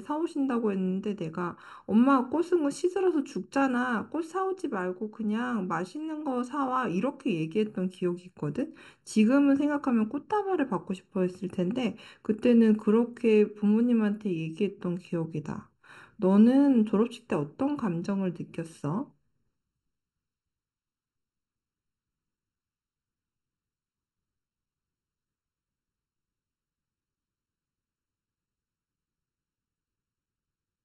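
Hollow and phasey from start to finish, the speech shows channel delay (comb filtering): one channel lags by under a millisecond, cancelling evenly spaced frequencies from around 700 Hz when summed.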